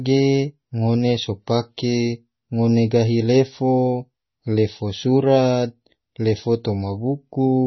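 Throughout, the speech is dull above 5.9 kHz and watery, with swirling, chirpy sibilants: likely heavy MP3 compression, consistent with a bitrate near 24 kbps.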